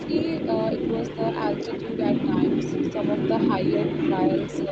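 A delayed second copy of the speech trails the original by about 0.31 s from start to finish, sitting roughly 5 dB louder than the direct speech. This is an echo leak, likely caused by a far end playing the call on a loudspeaker whose echo canceller let part of the microphone pickup through and sent it back. The high end of both copies stops near 8 kHz, consistent with an Opus call path at around 32 kbps.

At 2.63 s the speech briefly sags by a few decibels for about 70 ms, a short dip while the returning echo overlaps it. This is speech suppressed in double talk. The echo canceller likely could not tell the local talker apart from the loudspeaker echo while both were present, so it turned the whole signal down for that instant rather than removing only the echo.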